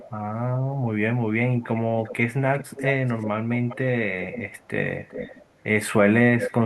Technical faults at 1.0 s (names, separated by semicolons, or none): none